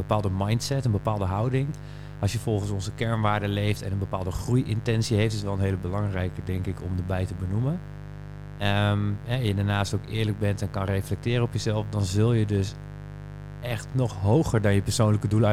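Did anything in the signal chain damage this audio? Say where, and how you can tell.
Yes: mains buzz entering the analogue wiring, a raspy 50 Hz drone only about 15 dB below the speech throughout, showing as stacked harmonic lines to several kHz.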